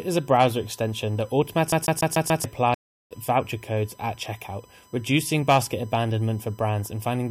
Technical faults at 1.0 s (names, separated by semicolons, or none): USB whine